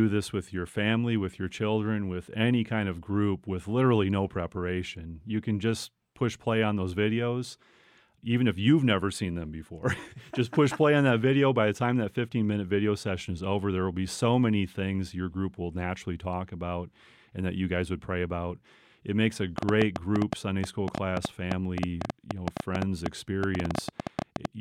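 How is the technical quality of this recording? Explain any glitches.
The recording has one clear glitch. From 19.58 to 24.46 s, a train of clicks ticks irregularly at about 8.2 per second, roughly forty pops standing well above the speech, likely interference from nearby equipment or a faulty connection.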